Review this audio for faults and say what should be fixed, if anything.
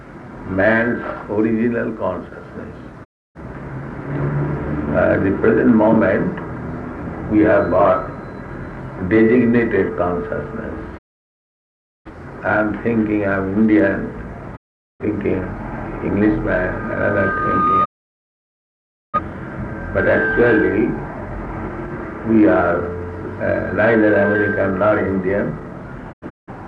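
Digital broadcast dropout mutes the sound at 3.03–3.40 s, 10.97–12.11 s, 14.55–15.04 s, 17.84–19.19 s and, as several short holes, 26.11–26.52 s. Each time, the receiver lost valid frames and faded to silence within 20 ms until good frames returned. A stronger, cleaner received signal, with better antenna placement, would prevent these mutes.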